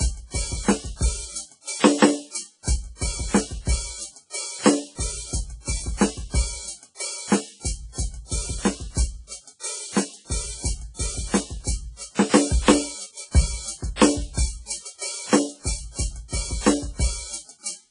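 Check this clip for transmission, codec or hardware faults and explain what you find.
One codec fault runs through the whole music clip: heavy WMA compression, likely. Nothing sits above 10.1 kHz, and long transform blocks smear quantisation noise into a ringing, washy hiss that breathes with the signal, which fits a bitrate near 24 kbps.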